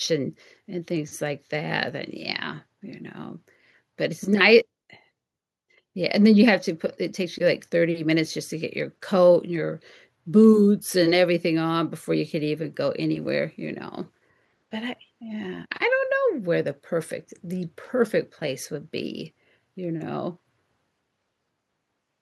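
Speech, with no technical faults to be heard.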